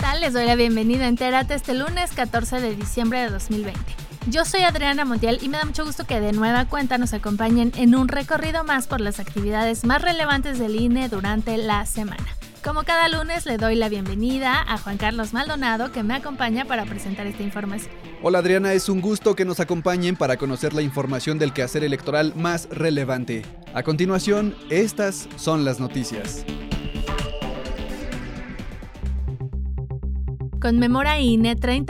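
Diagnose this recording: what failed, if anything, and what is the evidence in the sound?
No fault shows up at any stage of the chain, from the analogue wiring and converter through to storage and playback, so there's nothing to diagnose in this recording.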